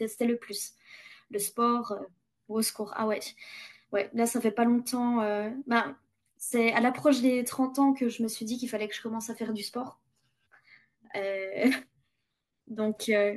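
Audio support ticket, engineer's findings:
No faults found in the signal path for this speech recording; capture, levels and playback all check out with nothing to flag.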